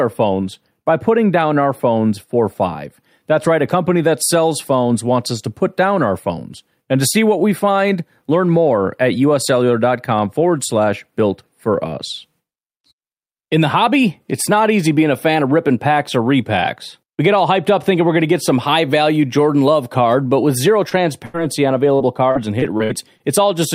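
At 20.89 to 20.93 s there is a short concealed packet loss. About 20 ms of speech never arrived and was patched by extending the preceding sound. It is heard as a brief smear or wobble. A spectrogram shows the preceding sound briefly held, with a slight seam in the waveform.

From 21.25 to 21.36 s a burst of packet loss removes about 80 ms. The decoder fills roughly 84 ms by continuing the last sound and fading it, giving a held buzz or fading hiss before the speech jumps ahead. On a spectrogram this appears as a smoothly decaying frozen band followed by an abrupt restart.

From 21.96 to 23.22 s repeated packet loss gives a choppy, robotic sound. Six separate gaps, the longest 57 ms, remove about 200 ms in total, so around 16% of that stretch is synthetic fill. The spectrogram shows a row of short frozen or smeared patches breaking up the normal speech texture, and the waveform shows repeated flattened, periodic segments.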